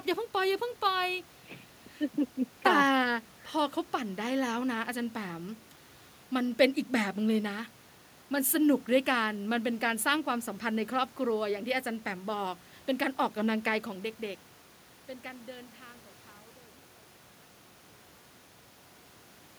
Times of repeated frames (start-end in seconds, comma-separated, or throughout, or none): none